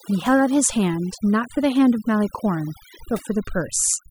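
From start to finish, overdone noise removal is at work: a noise reducer set too aggressively cuts individual frequency bands whenever they sit near its noise estimate, taking quieter parts of the speech too. The pauses drop and break up into twinkling specks.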